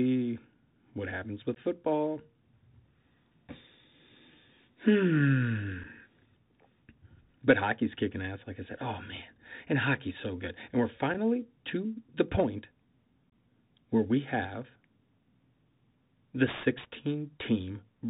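The speech runs through a Bluetooth CVSD headset codec for the whole clip: a one-bit-per-sample delta coder with an adapting step size, so nothing above 4 kHz survives. The damage is plainly audible, with scratchy s sounds, loud bright passages breaking up, and a granular hiss beneath.

Unconcealed Bluetooth headset packet loss punches short holes into the link with abrupt edges. Just after "what happens with", 1.55 to 1.59 s loses about 15 ms, roughly two packets. Single packets of 7.5 ms drop at 5.84 s and at 11.14 s, the latter just before "to the point". A longer 22.5 ms gap of about three packets falls between 13.30 and 13.32 s, just before "where we have". The speech briefly returns quieter after each gap.

From 15.36 s to the end, sample clock jitter of around 7 µs makes the converter sample slightly early or late. The resulting error sits only about 10 dB below the signal, adding a hiss and roughness that grows on loud, high-pitched sounds and disappears in pauses.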